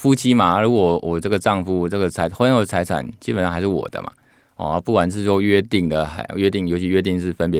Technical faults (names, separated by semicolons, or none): none